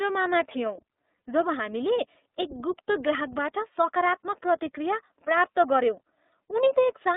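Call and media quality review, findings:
iLBC codec, whole clip: speech carried over a narrowband iLBC link, with band limited to roughly 250 Hz to 3.7 kHz. Codec damage plainly audible: rough, slightly synthetic texture, dull top end. Behaviour fits the 13.33 kbps, 30 ms frame mode.

Lost iLBC frames, 1.16 to 1.19 s: packet loss on the media path, a 30 ms dropout, about one frame. Decoder concealment repeats the last pitch cycle with added noise, giving a brief held, buzzy vowel; the voice is right again almost at once afterwards.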